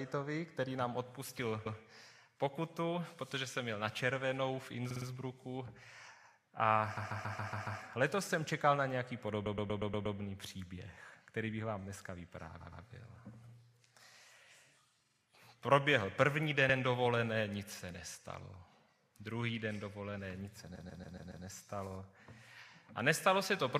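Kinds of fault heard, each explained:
Repeated frames: a short stretch of compressed audio is decoded again, so a 45 to 140 ms snippet replays one to six extra times. Stutters come at 1.65, 4.89, 6.96, 9.45, 12.59, 15.05, 16.68 and 20.74 s. Unlike a dropout, nothing goes missing; the sound gets longer.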